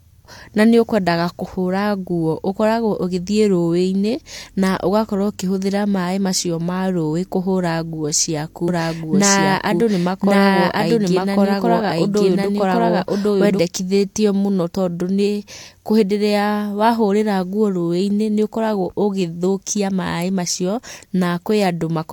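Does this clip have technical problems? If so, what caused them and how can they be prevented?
Yes. From 8.68 to 13.60 s the speech plays twice: a second copy at roughly equal loudness trails about a second behind, dry and without decay, starting and stopping abruptly. This doubled audio track is likely caused by a slower second capture path or an edit holding two out-of-step copies. Route each source through one capture path only and check edits for duplicated regions.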